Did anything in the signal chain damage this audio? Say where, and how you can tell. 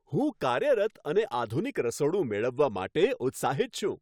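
No, nothing in the signal chain stood out as damaging this recording when I listened to it.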